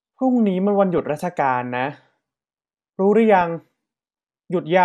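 MP2 compression is audible from the start of the speech to the end. The sound is dull and carries a gurgling, granular roughness, and the likely cause is MPEG Layer II coding at a low bitrate, somewhere around 80 kbps. The coder divides the signal into 32 sub-bands and shares out a tight bit budget. Upper bands get switched off and flicker in and out, and the bands that remain are quantised coarsely. That explains the lost brightness and the grainy texture.

DAB burbling occurs from 0.97 to 1.23 s, a burst of about a quarter of a second heard as burbling over the speech. Bit errors at a rate of roughly 0.2 percent got past error correction and into the MP2 data, consistent with about a dozen damaged frames. Corrupted samples put short blips of noise in single sub-bands, and corrupted scale factors make sub-bands jump in level for up to a frame, producing the burbling.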